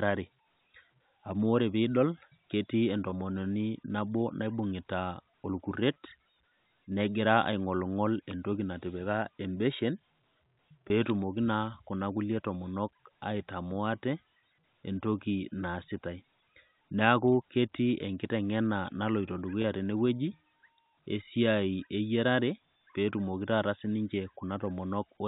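A brief buzzy hold, as if the speech sticks on one pitch for an instant, occurs at 3.10–3.12 s, 5.94 s, 10.88–10.90 s and 19.62–19.64 s. This is packet loss with pitch repetition. Each gap of about 20 ms, consistent with one lost packet, is bridged by repeating the last pitch period over the G.711 telephone coding.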